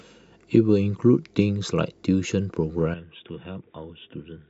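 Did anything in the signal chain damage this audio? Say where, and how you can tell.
Yes. At 2.94 s the speech abruptly loses its top end and stays that way to the end of the clip, with nothing above 3.8 kHz. The level drops by about 10 dB, and a new, faint noise floor appears well below the speech. There is no gap at the transition. This points to the input stage, most likely the input switched to a poorer device mid-recording, such as a narrower-band microphone or a headset in call mode.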